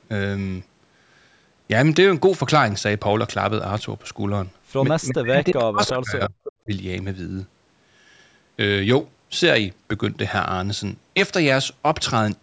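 From 5.09 to 6.36 s the speech dips and breaks up, adding up to roughly a second of lost level, at worst around 40 dB down. This is likely speech suppressed in double talk: with both sides talking, the echo canceller mistook the near talker for loudspeaker echo and turned everything down. On a waveform the envelope collapses in ragged chunks. On a spectrogram the harmonics fade to near-blank patches, with the upper bands thinning first.

Between 6.44 and 6.52 s a faint delayed copy of earlier speech surfaces, about 15 dB below the main voice and trailing it by 321 ms. That is likely an echo leak, where residual loudspeaker sound slipped past the far end's canceller and came back. On a spectrogram it appears as a weak, smeared repeat of the earlier harmonic pattern, shifted right by roughly a third of a second. On the waveform it is a low hump.

At 6.64 to 6.70 s a second, brief suppression, likely double talk again, cuts about 20 dB for some 70 ms, a short notch in the envelope and a narrow vertical gap in the spectrogram, below its normal 8 kHz ceiling.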